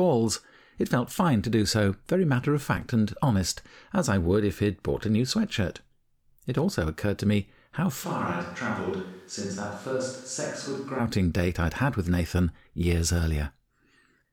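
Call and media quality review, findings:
Speech turns abruptly roomy, hollow and thin at 8.06 s, about 5 dB quieter, room noise rising to roughly 30 dB below speech; reverts abruptly at 10.98 s. Likely switch to a distant microphone: close-mic feed dropped, farther pickup substituted.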